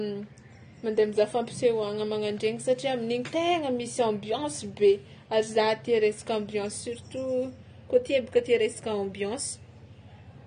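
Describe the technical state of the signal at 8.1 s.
At 8.1 s the speech carries AAC compression damage, as it does across the whole clip: the sound is dull and smeared, with a watery, warbling fizz on sibilants. Nothing sits above 9.7 kHz, which on a spectrogram shows as a flat ceiling with patchy holes below it, while the waveform looks ordinary. The likely cause is AAC-LC quantising each frame's frequency lines too coarsely, which fits a low bitrate around 32 kbps.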